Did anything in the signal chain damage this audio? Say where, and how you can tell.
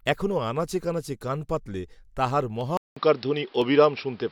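Yes. Dropped samples: sharp clicks at 0.31 s, before "আনাচে কানাচে কান পাতিলে", then 2.61 s and 3.62 s. These are likely driver or buffer losses well under a millisecond.

Input switched to a poorer device at 2.77 s, after "কানাচে কান পাতিলে তাহার". There is 0.19 s of silence, then a narrower band, a level change of about 5 dB, and new noise about 35 dB down.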